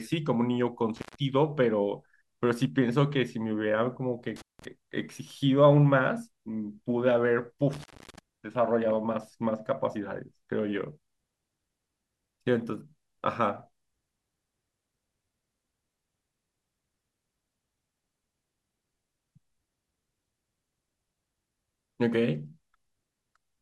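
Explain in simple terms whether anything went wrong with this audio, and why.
Yes, something went wrong: an intermittent contact, meaning a loose cable or plug briefly lost its connection. The speech drops out with a crackle at 0.96, 4.36 and 7.73 seconds, for roughly 0.13, 0.18 and 0.25 seconds, leaving only faint hiss.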